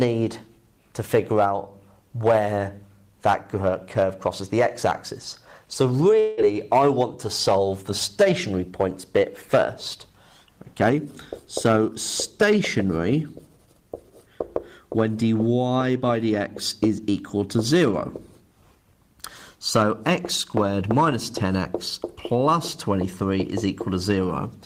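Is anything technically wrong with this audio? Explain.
Yes. From 6.19 to 6.40 s there is what sounds like a long network dropout. The incoming stream likely stopped arriving for about 0.2 s, so the receiver had nothing to play and stretched the last sound it had to fill about 178 ms. That fill is a fading buzz or hiss with no true silence. The audio then resumes further on, missing about 180 ms.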